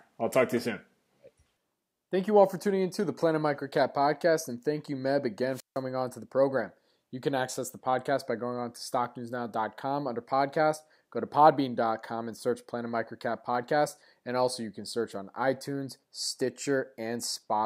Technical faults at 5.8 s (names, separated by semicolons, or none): wireless microphone squelch dropout